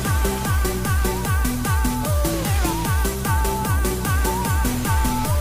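No technical faults detected.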